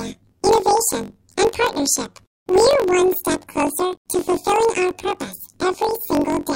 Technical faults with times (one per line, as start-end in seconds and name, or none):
0.00-6.56 planar audio read as interleaved